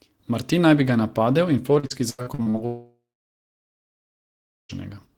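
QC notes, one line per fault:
1.79–2.57 s, repeated packet loss (robotic sound): right after "bi ga napadel in", packets go missing seven times, the longest gap 83 ms, and each hole is bridged by stretching the preceding sound. About 39% of the span is patched, so speech turns choppy and robotic.
2.66–4.72 s, long network dropout: the stream stops for about 2 s, likely a network outage. The last sound is carried on briefly as a fading buzz or hiss, then roughly 1.7 s of silence follows before speech resumes with the lost portion gone.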